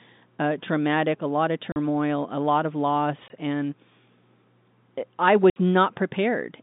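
Packet loss filled with silence cuts the speech three times: right after "a lot of" at 1.72–1.76 s (40 ms), after "a lot of" again at 3.28–3.30 s (20 ms), and at 5.50–5.56 s (60 ms). The lengths point to lost 20 ms packets replaced by silence. Each hole has hard edges.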